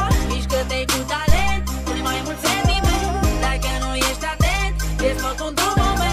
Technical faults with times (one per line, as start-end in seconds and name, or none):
1.29-1.77 phantom power thump